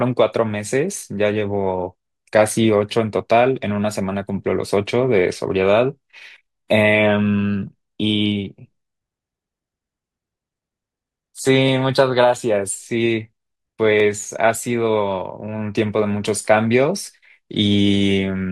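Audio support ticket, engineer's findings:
Two sharp single clicks in the speech, at 11.68 s and 14.0 s. Each is a thin vertical line on the spectrogram. Likely dropped samples: a fraction of a millisecond missing, so the waveform jumps straight to a later value. Too short to lose any audible sound.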